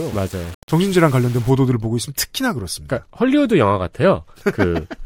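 From 0.0 to 1.5 s the speech sounds grainy and rough. The grit rises and falls with the signal, roughly 25 dB below it. Quiet parts turn especially gritty. The likely cause is low bit depth without dither, rounding that fits about 6 bits.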